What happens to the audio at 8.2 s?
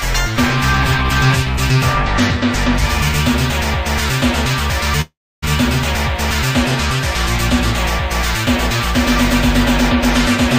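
Nothing goes wrong at 8.2 s; the audio plays through that moment intact, with no dropout, click, distortion or other fault.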